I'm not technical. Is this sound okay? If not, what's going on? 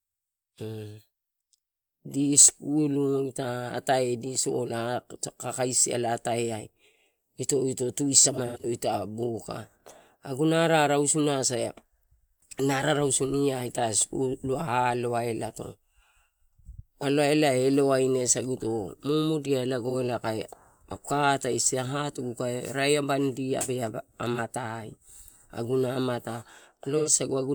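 No, there are a few glitches in this speech clip. It's AAC frame loss with concealment: small chunks of the compressed audio went missing, and the player patched each gap by reusing the last good bit. You hear brief smeared, hissy moments: a cluster from 8.2 to 8.65 s with gaps up to about a tenth of a second, then short blips at 19.9 s, 24.3 s, and 27.0 to 27.1 s.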